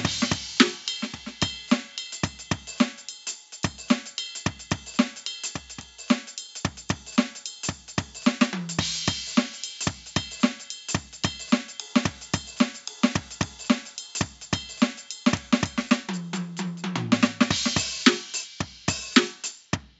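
From start to finish the music has that dull, gurgly, grainy edge of MP2 compression, likely from a starved bitrate, around 80 kbps by the sound of it, with upper bands flickering out.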